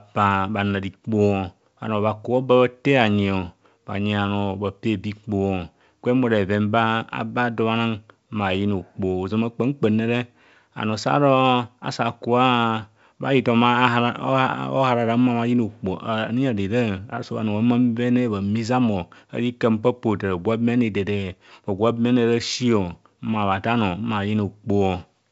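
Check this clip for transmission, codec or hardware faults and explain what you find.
No transmission, codec or hardware faults are audible here.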